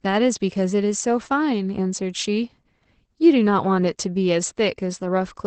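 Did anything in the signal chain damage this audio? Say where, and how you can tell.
Yes. Opus voice compression runs through the whole speech clip, damaging it at the codec stage. Nothing sounds above about 8.8 kHz, and the plainly audible muffled, hoarse, slightly robotic tone fits SILK's coarse excitation coding at roughly 12 kbps.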